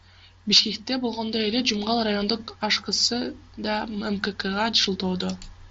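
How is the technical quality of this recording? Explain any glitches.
No audible glitches or faults.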